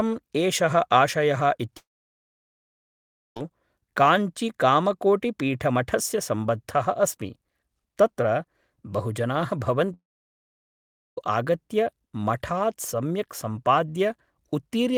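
At 1.77 to 3.37 s and again at 9.94 to 11.18 s, just before "आगत्य मठात्", the speech stops, a brief fading buzz or hiss follows, then silence for about 1.5 and 1.2 s, likely a long network dropout. Unlike short packet loss, whole stretches vanish rather than tiny gaps.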